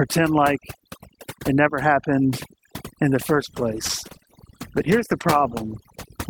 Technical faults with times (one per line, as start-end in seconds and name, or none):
0.00-6.30 overdone noise removal
3.32-6.30 call bitrate drop